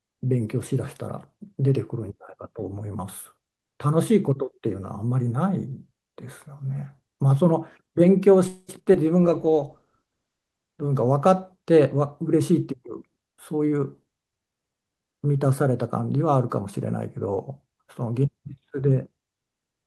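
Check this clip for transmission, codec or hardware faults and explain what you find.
There's a cluster of network trouble in this speech clip, mostly between about 8.5 and 14.5 seconds.

At 8.47 to 8.70 s there's a call audio freeze. The last sound gets stretched into a fading buzz for about 210 ms, with a brief silent moment, before the speech picks up again where it left off. The likely cause is packets getting held up and the jitter buffer running dry. Nothing's lost, but that 210 ms gap gets added to the delay.

Right after that come two short concealed packet losses. At 8.84 to 8.88 s about 20 ms never arrived, and the receiver patched it by continuing the previous sound, so you get a quick smear. At 8.94 to 8.96 s roughly 40 ms goes missing with no fill at all. That's heard as a tiny jump forward that claws back about 40 ms of delay.

From 9.21 to 9.85 s there's a jitter buffer slow-down. 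The receiver was rebuilding its reserve, so it repeated single pitch periods and slivers of pauses, adding about 45 ms in total. Speech runs at 94% speed with the pitch unchanged, so it sounds slightly drawn out, maybe with a faint warble.

Overlapping that, from 9.24 to 11.86 s, there's a call bitrate drop. The bandwidth estimate fell and the encoder went from 48 kbps down to 13 kbps. It sat at the bottom for about 1.27 s. At that rate the coding gets coarse and the top end is trimmed, so the voice sounds rougher and duller until things recover.

Finally, 12.86 to 14.48 s is a jitter buffer speed-up. The buffer had too much audio queued, so the receiver snipped out short chunks of pitch periods, dropping roughly 200 ms. Speech runs at 112% speed with the pitch unchanged, and it comes across as a bit hurried.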